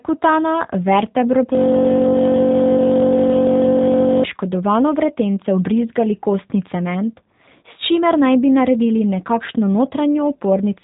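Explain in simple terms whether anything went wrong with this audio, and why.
From 1.55 to 4.24 seconds the speech stops and is replaced by a flat, mechanical buzz. That is a system hang loop: the computer or its sound driver froze while the sound hardware kept replaying the last small piece of audio it held. The piece is about 21 ms long, so it repeats roughly 47 times a second, well over a hundred times in all, which fits a 1024-sample buffer. At that speed the repeats blur into a steady drone rather than a stutter.

Throughout the clip the speech also sounds muffled, slightly rough and a little artificial, like a cheap internet phone call. This is the G.729 codec, a phone-line format that squeezes speech down hard by rebuilding it from a simple model of the voice instead of storing the sound itself. Nothing above about 3.8 kHz survives, which takes away crispness, and the rebuilding leaves a synthetic edge that is plainly audible here.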